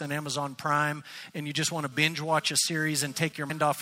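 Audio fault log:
1.92–3.32 s, GSM phone buzz: A hard, raspy buzz at 217 Hz, about 26 dB below the speech, appears in intermittent bursts rather than a steady tone, which fits a nearby 2G phone doing a data transfer. The audio circuitry is rectifying the phone's radio pulses into the signal. On a spectrogram this shows as a stack of evenly spaced horizontal lines at 217 Hz and its many harmonics that switch on and off independently of the speech. The waveform shows a fine, regular ripple.
3.49 s, compressed frames skipped: The speech jumps forward by roughly a fifth of a second. Several whole compressed frames, each 26.1 ms long, were never played, either because they were missing from the stream or because the decoder discarded them as damaged. Because neighbouring frames overlap, the join is heard as a short smeared blip, not a sharp click. On a spectrogram the harmonic pattern changes abruptly at a vertical seam with a faint broadband smudge. 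The waveform shows a discontinuity with no sharp spike.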